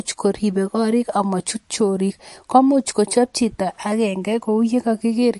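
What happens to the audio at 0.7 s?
At 0.7 s the speech carries the same damage heard across the whole clip, most likely MP3 compression. Nothing is present above 11.3 kHz, a hard treble cut-off that fits an encoder short of bits at a low rate around 48 kbps. The codec also drops weak frequency components that flicker in and out between frames, so the sound turns plainly watery and swirly, with chirpy sibilants and softened onsets.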